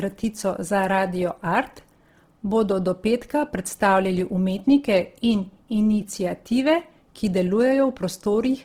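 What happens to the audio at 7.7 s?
Opus compression is audible at 7.7 s, as it is across the whole clip. The speech sounds rough and grainy, likely from Opus music mode at a rate near 16 kbps, filling underfunded bands with folded or noise-like content while keeping fullband reach to about 20.3 kHz.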